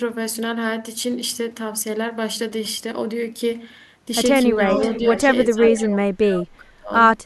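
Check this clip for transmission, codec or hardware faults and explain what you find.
Two faults from a speakerphone-style echo path show up in the second half of this speech clip: leaked echo and suppression of the talker during double talk.

Echo leak, from 4.71 to 5.22 s and again briefly from 5.74 to 5.80 s. The far end's echo canceller likely failed to remove everything its microphone picked up from the loudspeaker, and the remainder was sent back. The result is a delayed copy of the speech, arriving 423 ms late and sitting roughly 15 dB below the main voice. It is heard as a faint trailing repeat, with only a short scrap in the second instance.

Speech suppressed in double talk, from 4.97 to 5.27 s and from 5.46 to 6.93 s. While both ends were active, the echo canceller likely could not separate the local talker from loudspeaker echo, and it attenuated both together. In the first stretch the talker's speech dips only slightly. 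In the second, which lasts about one and a half seconds, the level drops by as much as roughly 30 dB, so the voice sounds heavily ducked and partly cut out.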